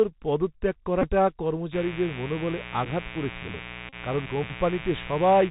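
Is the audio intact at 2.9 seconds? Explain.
No. At 2.9 s the Bluetooth CVSD headset codec is at work across the whole clip. Its one-bit up-or-down coding, which fits a 64 kbps link, cuts everything above 4 kHz. A spectrogram shows an empty band above that line. Sibilants sound scratchy, with a granular hiss under the speech.

A mains buzz, running from 1.71 s to the end, is also present there. Switching spikes tied to a 60 Hz supply give a raspy, steady hum about 15 dB below the speech. A spectrogram shows evenly spaced horizontal lines at multiples of 60 Hz, reaching well up the spectrum.

Just before, at 2.85 s, a Bluetooth headset packet repeated. The decoder replayed stale bits for 7.5 ms, which points to two lost packets. It is heard as a brief tick or buzz. On the waveform a short stretch repeats itself, with a vertical seam on the spectrogram.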